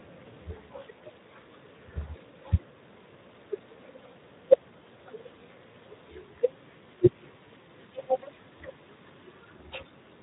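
A speech recording with Speex codec damage from start to finish. The damage is plainly audible, a hoarse, noisy roughness on the voice. This comes from too few bits for the excitation signal, which fits a setting near 11 kbps. Nothing is present above 3.8 kHz.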